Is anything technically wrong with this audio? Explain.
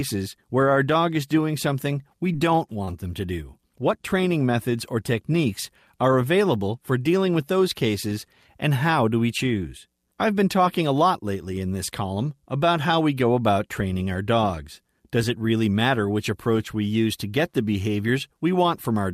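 Yes. Scattered short gaps run from 1.99 to 2.89 s, between "doing something" and "them to do". In that stretch, roughly four brief holes appear where packets were lost or arrived too late. None lasts longer than about 20 ms. The receiver covered each one by extending the sound it had just played, patching around 50 ms in total, a small share of the span. The speech stays intelligible, but you hear quick ticks and slight smeared hiccups.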